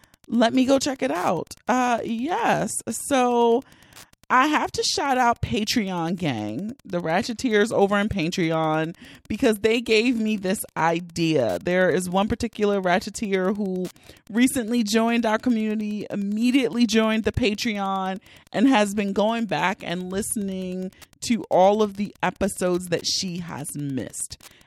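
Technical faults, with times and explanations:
Throughout, Wi-Fi interference: a faint, steady ticking runs under the speech at just under ten clicks a second, roughly 35 dB below the speech. A nearby Wi-Fi radio is sending its beacon every 102.4 ms. Some part of the audio circuit behaves like a crude diode and rectifies those radio pulses, so each transmission leaks into the signal as a short audible click. The result is a regular, mechanical pulse under the speech.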